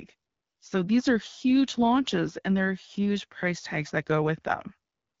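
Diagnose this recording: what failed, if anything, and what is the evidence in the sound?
Nothing failed in this recording; the speech, carried over the AMR wideband (HD Voice) codec at 12.65 kbit/s, gives no evidence in the sound of any fault.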